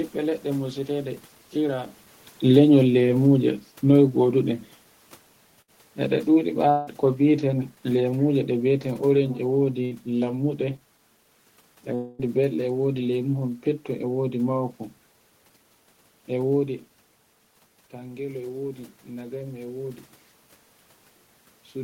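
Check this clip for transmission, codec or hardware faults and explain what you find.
Yes, there are transmission faults: two stretches of automatic gain falling, two bursts of packet loss, and two longer gaps.

Automatic gain falling runs from 2.41 to 4.52 s and again from 6.01 to 10.34 s. The gain control judged the input too loud or its background noise too strong and eased its gain down, by about 4 dB and then about 3 dB. The speech and its room background sink together.

A burst of packet loss hits at 5.61 to 5.70 s and at 9.85 to 9.93 s. About 60 ms of audio never arrived. The receiver stretched the last sound to fill the hole, so a brief fading buzz or hiss replaces it. Speech resumes slightly further on.

Longer gaps fall at 6.71 to 6.89 s and 11.95 to 12.21 s, lasting about 160 ms and 240 ms. The cause is likely a long network dropout. The last sound is carried on and fades, with no true silence, before speech returns past the missing part.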